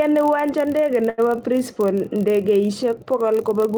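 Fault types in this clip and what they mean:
Block size mismatch (padded), throughout: one stage hands over blocks slightly shorter than the next stage expects, which points to 1024-sample reads, and the shortfall in each block is filled with zeros. Those tiny regular gaps produce a steady buzz at about 43.1 Hz running under the speech for the whole clip. Because so little is padded, the speech runs only marginally slow, at 0.999 times normal speed.
Short stall from a late packet, 1.09 to 1.20 s: just after "uwanja ndege" a packet arrived late and the jitter buffer ran dry, so the receiver held the last sound for about 84 ms until data resumed, then continued from the same point. Nothing is lost, but that moment is audibly drawn out, and everything afterward is 84 ms later than it would have been.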